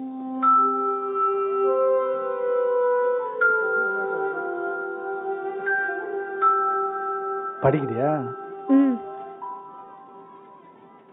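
No technical faults can be heard anywhere in this clip. The sound runs without any audible disturbance or interruption.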